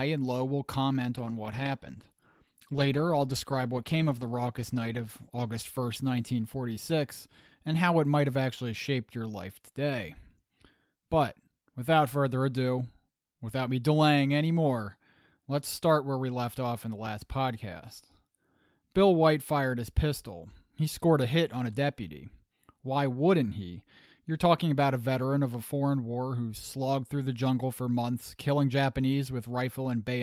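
Right from 1.18 s the speech takes a call bitrate drop that lasts until about 7.97 s. The connection's bandwidth estimate sagged, so the encoder was squeezed onto far fewer bits. The sound goes coarse and watery, with the top end shaved off so it turns muffled. That fits a fall from roughly 48 to 16 kbps. It stays at its worst for about 3.7 s before the detail comes back.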